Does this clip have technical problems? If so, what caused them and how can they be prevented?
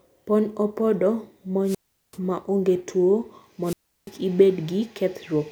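Yes. Two wireless microphone squelch dropouts break up this speech. The first runs from 1.63 to 2.18 s, just before "maonge tuo". The second runs from 3.63 to 4.11 s, just after it. Each begins with a rise of hiss. Then the output falls almost silent, for 386 ms and then 344 ms. The radio signal weakens, and the receiver's squelch shuts the audio off. Keep the transmitter close to the receiver, in clear line of sight, ideally with diversity antennas.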